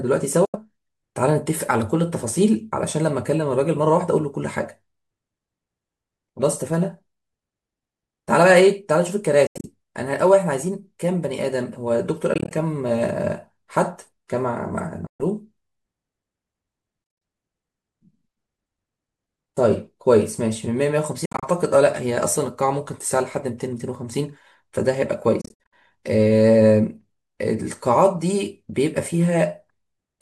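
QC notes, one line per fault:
0.45–0.57, 9.47–9.67, 12.34–12.53, 15.07–15.23, 17.04–17.22, 21.25–21.46 and 25.41–25.74 s: Bluetooth dropouts. The speech cuts to silence, then carries on further along, as if it had kept playing. Gaps at 0.45 and 15.07 s are single holes of 84 and 126 ms. The others are broken into several shorter gaps, up to 84 ms each. The longest cluster, at 25.41 s, loses about 182 ms in total. The likely cause is packets missing the headphone link in time.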